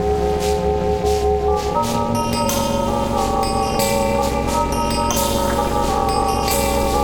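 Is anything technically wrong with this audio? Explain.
Yes. Overlap-add ripple runs through the whole music clip. The frames were rejoined with an overlap that doesn't sum to constant gain, so the level dips by about 60 dB once per frame, around 300 times a second. This is heard as a metallic buzz with extra tones around each note.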